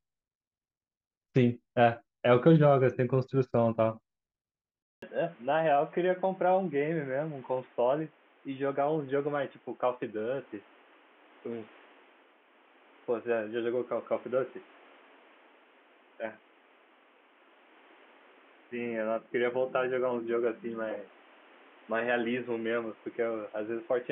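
At 4.82 s the speech cuts out for about 200 ms. It returns duller and boxier, and it stays that way to the end. Nothing above 3.6 kHz comes through after the gap. The level drops by roughly 5 dB. A new background noise sits roughly 30 dB under the voice. This sounds like an input switched to a poorer device, likely a headset or a second microphone. Its narrower band, lower gain and own noise replace the original pickup.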